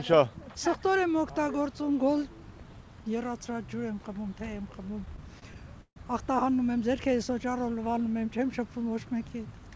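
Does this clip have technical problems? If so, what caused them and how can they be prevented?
Yes. Repeated stalls (stutter) occur between 5.06 and 5.98 s. Late packets emptied the jitter buffer five times, longest 150 ms, and the receiver stretched the last sound each time. A spectrogram shows frozen, smeared columns, and the waveform shows repeated, fading cycles. A steadier network path and a larger adaptive jitter buffer would prevent it.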